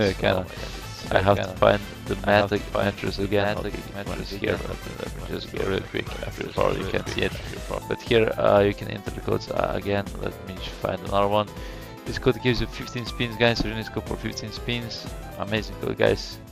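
A second, slower capture path or an out-of-step edit likely mixes this audio in twice: a doubled audio track, about a second behind and somewhat quieter, running from the start until stopping abruptly at 7.78 s.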